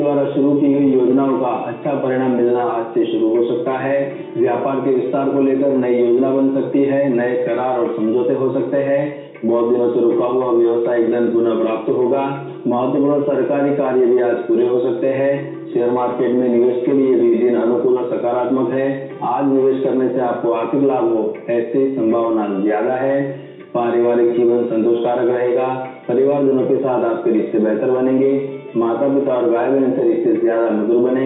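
Nothing goes wrong at any point here; the audio just runs along steadily without a single technical hiccup worth pointing out.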